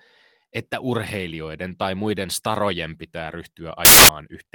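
At 3.85 s, right after "tai muiden starojen pitää", the speech gives way to a burst of loud, harsh noise. It lasts until 4.09 s, about a quarter of a second. The fault is samples built from the wrong bytes. The reader assembled each sample from mismatched bytes. The rapidly changing low bits landed in the high-order position. They became the bulk of every value. The result is harsh broadband hiss.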